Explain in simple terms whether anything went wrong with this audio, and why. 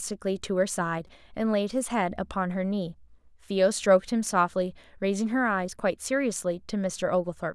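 Twice, at 1.07 s and 4.26 s, the speech gives a tiny buzzy click: a repeated buffer, where the same very short slice of sound, likely from a 128-sample buffer, replays instead of going silent like a dropout.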